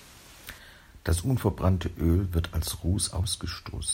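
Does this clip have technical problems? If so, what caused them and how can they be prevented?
Yes. Sample clock jitter runs throughout: a clock wobbling by around a microsecond or two mistimes samples, leaving hiss about 35 dB below the speech that swells on loud, bright syllables. Prevent it with a stable, low-jitter converter clock or a clean external word clock.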